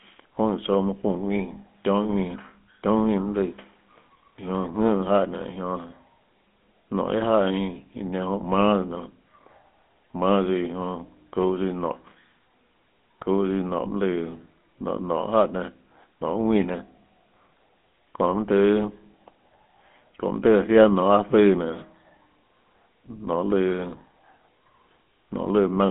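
Throughout, GSM full-rate codec coding leaves the speech buzzy and gravelly, consistent with 13 kbps, as regular-pulse excitation replaces the fine detail, within a 200 Hz to 3.5 kHz line band.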